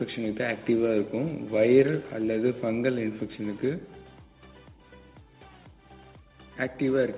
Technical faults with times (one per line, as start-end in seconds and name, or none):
none